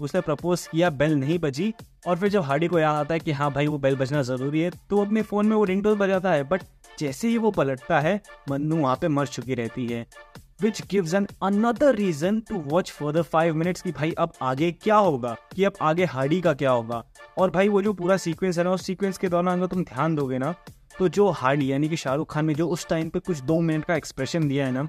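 No technical faults can be heard anywhere in the audio.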